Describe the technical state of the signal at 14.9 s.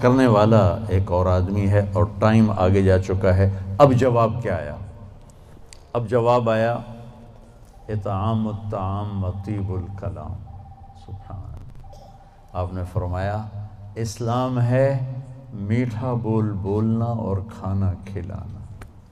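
At 14.9 s the signal is inside a stretch where one channel drops out, running from 4.03 s to the end of the clip. The level stepped down abruptly by about 6 dB at 4.03 s and has stayed there, which is likely because one stereo side went silent and the mono sum now carries only half of the shared content. Unlike a plain gain drop or fade, the change is instant, and anything panned only to the missing side is gone entirely.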